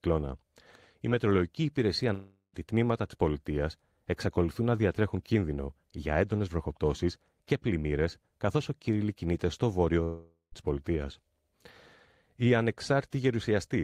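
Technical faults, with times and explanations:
2.13–2.55 s and 10.03–10.54 s, long network dropouts: The speech breaks off and the last sound carries on as a fading buzz. It then sinks into silence for about 0.13 s and 0.14 s. Speech resumes at "τμήματα της πολιτείας εξακολουθούν", and the second break comes just after "κύριλι κινείται στο βόρειο". About 0.4 s and 0.48 s of audio never return. The likely cause is packets that stopped arriving, so the receiver stretched the last sound to fill the gap.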